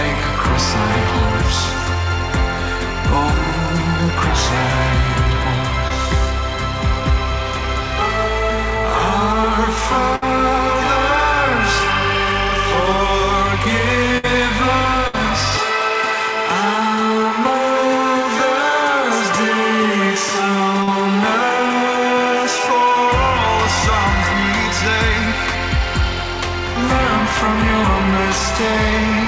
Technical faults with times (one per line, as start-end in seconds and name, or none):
5.88-5.92 short concealed packet loss
10.16-10.24 burst of packet loss
14.18-14.25 burst of packet loss
15.07-15.15 burst of packet loss
20.83-20.89 short concealed packet loss